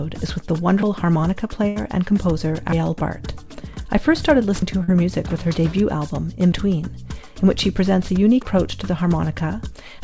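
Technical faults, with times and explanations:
0.83, 2.72, 4.62, 6.52 and 8.42 s: audio missing between chunks. At each point about a tenth of a second of sound drops out and the two sides butt together with no silence, heard as a jump. The steady spacing likely reflects 2.0 s processing chunks losing audio at every handover.
1.68 to 1.79 s: burst of packet loss. Roughly 80 ms of audio never arrived in time. The receiver extended the last sound for 77 ms while fading it, giving a held, decaying tail before playback resumes further on, with the intervening material gone.
4.84 to 4.91 s: short concealed packet loss. About 40 ms failed to reach the G.722 decoder, which has no content above 8 kHz. The gap was filled by continuing the preceding sound and blending back, so it comes across as a brief smear or wobble.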